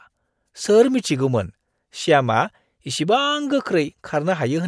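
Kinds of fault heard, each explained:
No technical fault can be heard anywhere in this speech recording.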